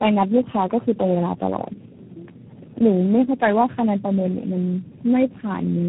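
Speech, and the whole thing suffers from tandem speech coding: it sounds rough, muffled and warbly, with nothing above about 3.9 kHz. That points to roughly four low-rate speech coders in a row, each recoding the previous one's already damaged output.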